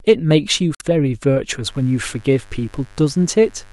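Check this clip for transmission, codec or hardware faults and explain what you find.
Two faults are audible: damaged data in the compressed stream, then mains buzz.

From 0.72 to 0.82 s there is damaged data in the compressed stream. Some bytes of the encoded speech were lost or corrupted there. The decoder misreads those frames and loses sync. It then hunts for the next valid frame header before playback resumes. The result is a short glitch lasting about a tenth of a second. It breaks the speech abruptly.

From 1.66 s to the end there is mains buzz at 50 Hz. Something like a dimmer, a rectifier or a missing shield is letting sharp switching spikes into the signal path. They arrive twice per mains cycle, so harmonics of 50 Hz stack up into the kilohertz range. The buzz is steady and raspy. It sits roughly 30 dB below the speech.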